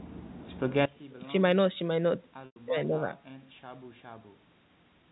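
From 0.86 s to the end, the mono level falls by about 22 dB. The centred speech and its low end nearly vanish, leaving a faint residue. The likely cause is one channel inverted, so the two channels cancel when summed to mono. On a waveform the envelope collapses abruptly, and a spectrogram shows the whole band dimming at once.

From 2.46 to 2.56 s, about 100 ms of audio is missing. The gap is filled by packet loss with pitch repetition: the last pitch period is looped and faded, which gives a brief buzzy hold before near-silence. A spectrogram shows evenly spaced, frozen harmonic stripes thinning out, and the waveform shows identical repeating cycles shrinking toward zero.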